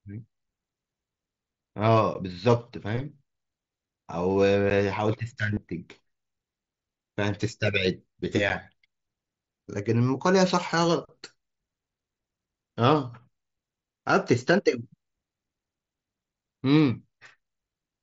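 It's a speech clip, coming through what sounds like a wideband mSBC Bluetooth headset link, with the slight grain on louder syllables that goes with it. You'll hear three blocks of digital silence, at 2.14 s, 4.7 s and 8.49 s, each a 10 ms hole where the sound cuts straight to silence and comes back with no fade. So each one lands as a sharp tick rather than a gap, the classic sign of an output buffer not getting filled in time. There's also concealed Bluetooth headset packet loss, once at 3.87 s lasting about 15 ms and again from 5.54 to 5.57 s, about 30 ms. The receiver patched over the missing audio by repeating recent waveform, so you get a brief buzzy, held quality with a little warble as real audio resumes, more noticeable on the longer one. Those lengths fit roughly two and four lost packets respectively.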